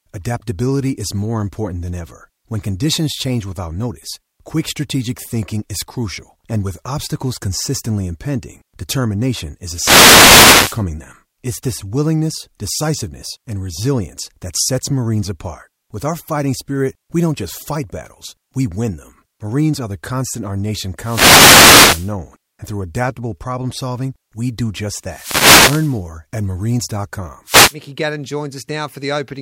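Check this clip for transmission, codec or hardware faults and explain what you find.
The speech is interrupted four times by wireless microphone noise hits. They run from 9.68 to 10.85 s, after "obstacles consistently impending determination"; from 20.98 to 22.14 s, between "constant our nation" and "and through adaptable problem"; from 25.03 to 26.02 s, after "solving we do just"; and from 27.45 to 27.76 s. Each is a swish of static. Multipath reflections cancel the analogue FM signal and the received level dips, so receiver noise rises over the voice.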